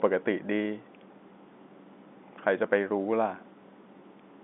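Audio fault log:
No faults turn up here; the speech simply comes over an ordinary G.711 telephone line, sitting in the narrow band of roughly 200 Hz to 3.6 kHz with nothing above 3.8 kHz, which is just how a phone call is supposed to sound.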